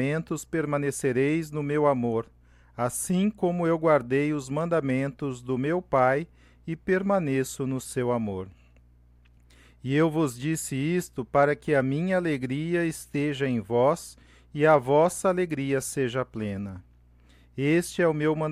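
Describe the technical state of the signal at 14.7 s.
At 14.7 s the speech signal is intact, with no audible fault at that point.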